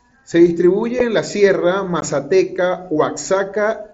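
Unconcealed Bluetooth headset packet loss drops voice frames between headset and phone with nothing filling the gaps. At 0.99 s a gap of about 7.5 ms, fitting one lost frame, cuts in just before "en la". From 2.00 to 2.03 s a 15 ms hole, likely two frames, opens. Both have abrupt edges in the mSBC wideband sound.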